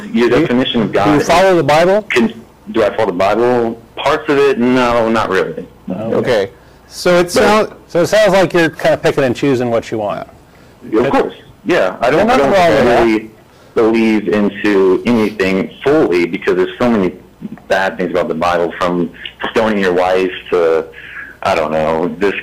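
Across the whole clip, the signal is driven about 18 dB beyond what a stage in the chain can pass, so hard clipping flattens every peak and roughly a seventh of the samples sit at the limit. The squared-off tops add high harmonics, heard as a constant harsh fuzz on every loud moment.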